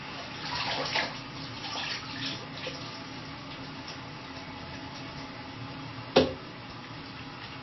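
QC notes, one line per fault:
Throughout, MP3 compression: watery, swirling sound with nothing above 5.8 kHz, likely an MP3 encoder short of bits, which fits a bitrate near 23 kbps.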